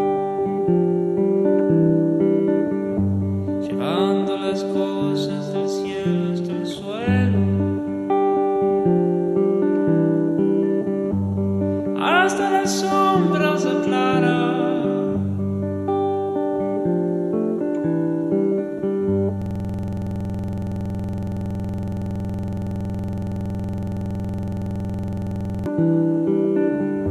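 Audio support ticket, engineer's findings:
System hang loop, 19.42 to 25.66 s. Same 46.4 ms slice repeats about 130 times, giving a rough 21.5 Hz buzz-stutter. Likely a driver or host stall while hardware kept cycling its ring buffer, which fits a 2048-sample buffer.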